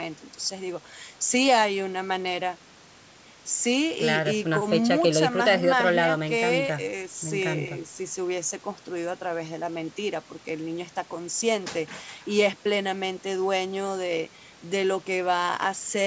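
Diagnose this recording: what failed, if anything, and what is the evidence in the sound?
Nothing stood out on listening to this speech recording; the only processing audible is the ordinary call microphone path, whose content stops at 8 kHz and whose lowest bass is trimmed as expected.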